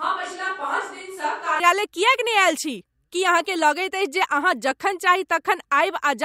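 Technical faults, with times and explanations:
0.0–1.6 s, switch to a distant microphone: the speech opens roomy and hollow, thin in the bass, about 10 dB quieter, with room noise faintly underneath, then snaps back to close sound at 1.6 s. The close mic's feed was likely missing there.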